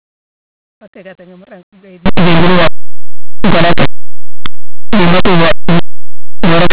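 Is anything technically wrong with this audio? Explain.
Yes. From 2.06 s until the end of the speech, linear audio is read as companded. Plain linear 8-bit samples are decoded as if they were mu-law codes, so small values just to one side of zero jump to near-maximum outputs while their mirror values stay small. The result is very loud, harsh distortion. On the waveform it appears as an abrupt jump to much larger amplitude. On a spectrogram it appears as dense broadband energy smeared across all frequencies.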